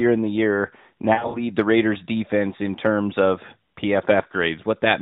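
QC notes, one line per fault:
1.14–1.47 s, lost AMR speech frames: about 140 ms of sound drops out in bursts spread over roughly 200 ms, which fits around seven lost 20 ms frames, with the longest gap about 60 ms. The decoder fills each hole by repeating the last good pitch and vocal tract settings at falling gain, so you get short warbly, smeared dips rather than clean silence, and the sound comes back thin for a moment. The narrowband codec underneath keeps everything below 4 kHz.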